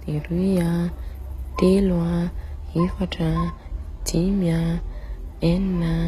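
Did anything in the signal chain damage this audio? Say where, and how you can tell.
Yes. Throughout the speech the treble sounds bright but synthetic: s sounds come out gritty and lispy, with a metallic sheen, and nothing reaches above about 14.9 kHz. That points to the codec stage, likely HE-AAC compression at a low rate, in keeping with roughly 20 kbps. The encoder kept only the lower spectrum and rebuilt the top by copying lower bands upward under a coarse envelope, so the upper harmonics no longer line up with those below.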